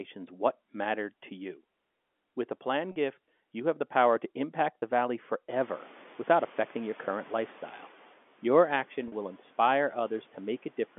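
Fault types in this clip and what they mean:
Packet loss with pitch repetition: Three brief spots sound held and slightly buzzy: right after "a plan", after "the power to impact", and just before "will inspire". About 40, 20 and 40 ms of audio were lost, and the receiver filled each gap by repeating the last pitch period.
Noise suppressor catching up: At 5.5 s the room's background noise jumps by about 22 dB and at first comes through with less reduction. Over about 2.6 s it sinks by about 8 dB as the suppressor's noise estimate slowly adapts to the new level.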